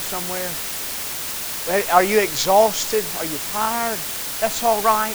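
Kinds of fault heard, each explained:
Low bit depth with dither: A steady, even hiss runs under the speech from start to finish, loud enough to sit only around 10 dB below it, yet with no gritty or crackling distortion. The very coarse level steps fit a resolution of about 5 bits. Small random noise was added before each sample was rounded, so the rounding error becomes constant broadband hiss instead of harsh distortion that follows the speech.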